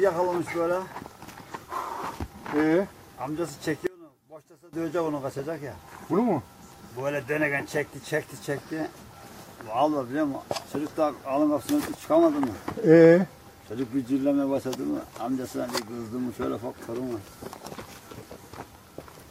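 One channel inverted, from 3.87 to 4.73 s: the sound suddenly collapses by about 22 dB into a faint remnant, likely because one stereo channel has flipped polarity, so everything common to both sides cancels when summed to mono.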